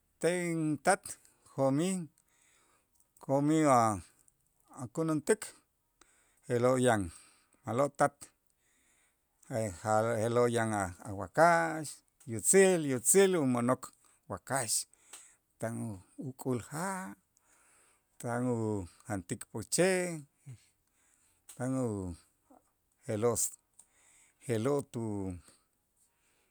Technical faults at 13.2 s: none

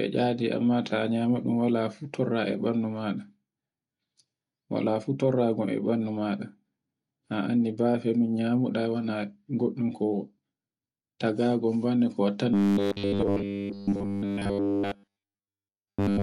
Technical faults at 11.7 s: none

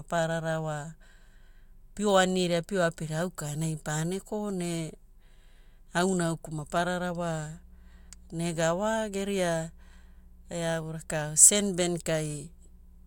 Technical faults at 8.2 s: mains hum

